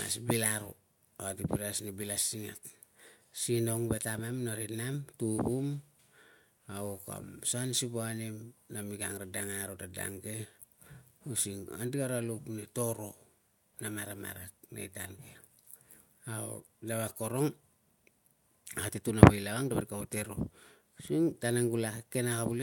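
No dropouts, clipping, distortion or timing faults are audible anywhere in this speech recording.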